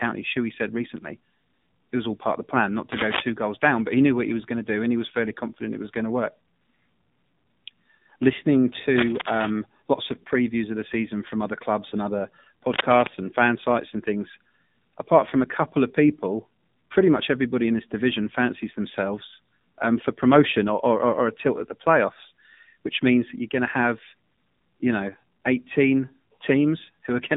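The AMR narrowband mobile codec affects the whole speech recording. Nothing passes above 3.8 kHz, and the line band runs from about 150 Hz to 3.7 kHz. The voice sounds thin, buzzy and plainly synthetic, which fits a low bitrate near 7.4 kbps.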